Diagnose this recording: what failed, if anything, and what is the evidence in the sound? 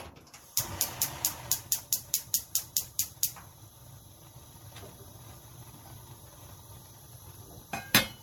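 The codec stage shows generation loss across the whole clip: the sound is swirly, smeared and hollow, with blurred attacks and content reaching up to about 19.9 kHz. The damage sounds worse than the bitrate alone would explain. The likely cause is repeated MP3 re-encoding, about ten times at around 96 kbit/s, with each pass's misaligned frames stacking noise and spectral holes.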